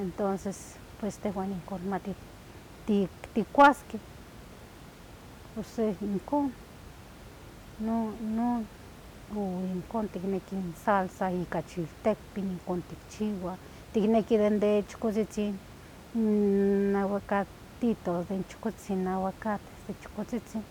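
A speech recording with no technical faults, carrying only the room's own background noise about 20 dB below the speech, as part of the recording itself.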